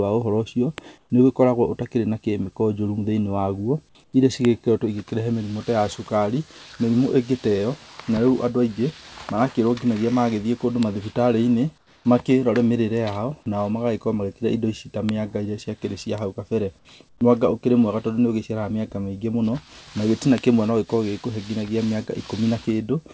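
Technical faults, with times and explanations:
0.78, 4.45 (just after "waguo iria"), 10.83, 15.09 (just after "indo ici ta"), 16.18 and 20.38 s (just after "na gĩtina"): bit error spike. A single flipped bit throws one to three samples far off, then snaps back, giving a sharp tick unrelated to the speech. On the waveform it is a lone needle. On the spectrogram it is a thin vertical line across all frequencies.
0.98 to 1.10, 4.04 to 4.13, 11.78 to 12.05 and 17.09 to 17.21 s: comfort noise in place of the background. In these 90 to 270 ms gaps, the real room tone gives way to a steady, featureless hiss about 4 to 6 dB quieter. This is likely discontinuous transmission filling silence with synthetic noise. The spectrogram shows smooth, even texture. The waveform shows a slight level dip.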